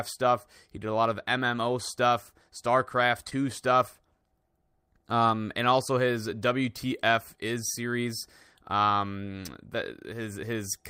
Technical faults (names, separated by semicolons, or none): short concealed packet loss